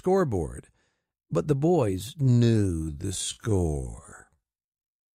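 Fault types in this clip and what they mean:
Time-stretched section: from 2.15 s to the end of the clip, the pace abruptly drops to roughly half speed (0.529x) while the pitch stays where it was. The slowed portion drags. This points to a likely cause in software that lengthened that stretch to fit a target duration, preserving pitch by repeating short pieces of the signal.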